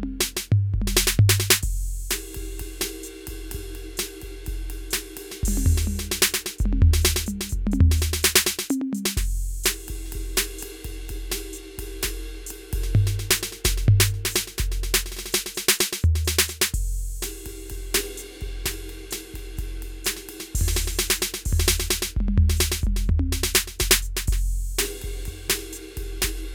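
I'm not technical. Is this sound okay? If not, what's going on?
No. Near the end of the music, at 25.48 s, there's a brief tick. It's a block of digital silence: for just 4.4 ms the sound is replaced by nothing at all, and the abrupt cut out and back in makes that click.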